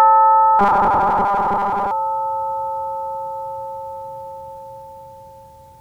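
From 0.59 to 1.91 s, robotic sound from repeated short buffers gives a metallic 200 Hz buzz, likely a looping 5 ms chunk, shown as even spectrogram stripes.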